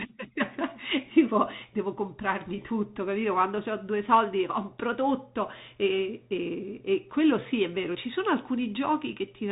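Speech carried throughout by a Bluetooth CVSD headset codec, whose one-bit slope coding leaves granular hiss and scratchy sibilants; the spectrogram shows a flat ceiling at 3.8 kHz.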